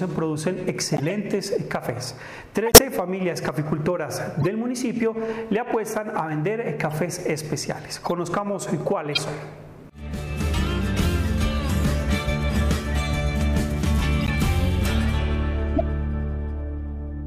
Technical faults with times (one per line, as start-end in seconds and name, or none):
0.94-1.12 corrupt frame decoded
2.66-2.78 corrupt frame decoded
4.41-4.46 corrupt frame decoded
6.90-6.92 corrupt frame decoded
8.03-8.07 corrupt frame decoded
9.13-9.18 corrupt frame decoded
14.21-14.30 corrupt frame decoded
15.76-15.81 corrupt frame decoded